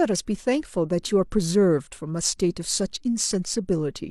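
A short speech recording, and nothing technically wrong turns up anywhere in it.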